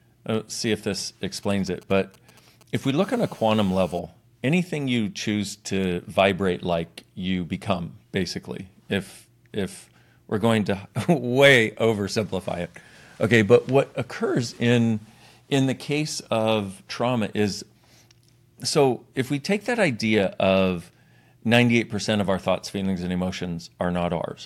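From 1.43 to 2.86 s, just after "uh see if this", GSM signalling bursts break in: a galloping dit-dit-dit of brief 217 Hz buzzes, roughly 25 dB below the speech. A nearby 2G phone exchanging short radio bursts is being rectified by the audio circuit, and the grouped, intermittent rhythm sets it apart from a call's continuous interference.

From 3.03 to 3.99 s, ending just before "anything you choose to", a GSM phone buzz follows: a hard, raspy 217 Hz drone rich in harmonics, about 27 dB below the speech. Here the phone is transmitting continuously in a call, so its rectified bursts form an unbroken buzz rather than the stuttering gallop heard earlier.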